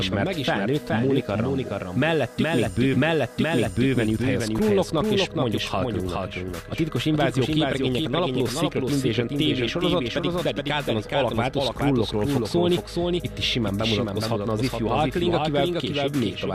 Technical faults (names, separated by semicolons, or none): doubled audio track; stream segment repeated